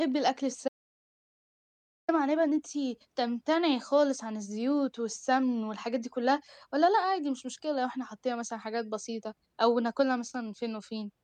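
At 0.68 s the speech cuts out to silence, with no room tone, until 2.08 s. That 1.4 s audio dropout to silence most likely reflects a lost input feed while recording continued.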